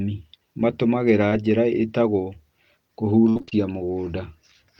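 Short concealed packet loss at 1.29 to 1.33 s in this speech recording leaves a brief smear: about 20 ms of audio never arrived in time, so the decoder extended the preceding sound to cover the hole before blending back into the real signal. Repeated packet loss (robotic sound) follows from 3.29 to 3.53 s, where five separate dropouts, the longest about 59 ms, were each patched by continuing the last sound. Concealment fills 58% of that span, giving a choppy texture.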